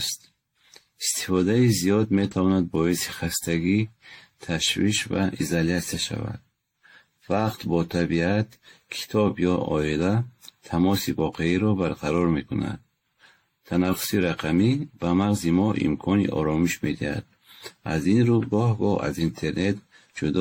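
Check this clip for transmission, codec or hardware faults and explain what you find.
One fault runs through the whole clip. The speech sounds swirly, hollow and smeared, with blurred attacks and nothing above 16.6 kHz. This is likely generation loss: repeated AAC re-encoding around seven times, at a rate consistent with 64 kbit/s, each pass piling up fresh quantisation damage.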